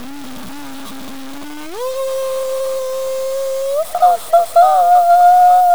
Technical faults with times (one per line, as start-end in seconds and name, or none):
0.00-5.75 low bit depth without dither